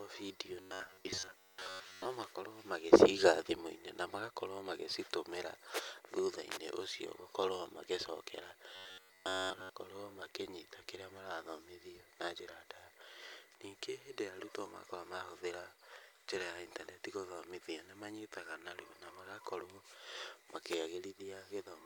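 From 0.60 to 2.05 s, then from 8.76 to 9.71 s just before "makĩnyita kĩrĩa marathomithio na", the speech turns into a robotic sound from repeated short buffers. It becomes a stiff metallic buzz near 94 Hz that only loosely tracks the words. New audio likely arrived too rarely. A slice of about 11 ms kept repeating to fill the gaps, and most of the real audio was skipped.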